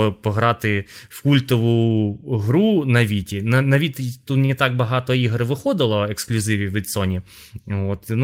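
At 4.45 to 4.51 s the speech briefly stalls from a late packet: the jitter buffer ran dry, so the receiver stretched the last sound by about 37 ms and resumed exactly where it stopped. Unlike a lost packet, nothing is skipped. One sound just lingers with a faint buzz or dip.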